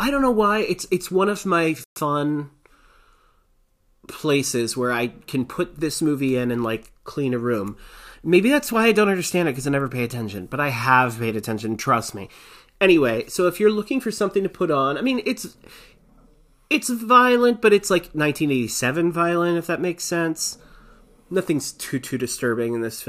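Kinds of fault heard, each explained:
Playback stall: At 1.84 s the speech drops abruptly to silence partway through, and nothing is heard for 120 ms until it resumes at 1.96 s. The gap is short but clearly audible as a hole in the flow rather than a natural pause. The likely cause is the player exhausting its buffered data or having its audio thread held up, leaving the output with nothing to play until it recovered.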